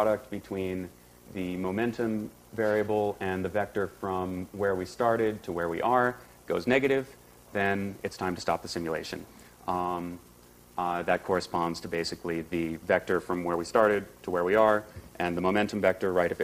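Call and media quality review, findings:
No audible faults found in this recording.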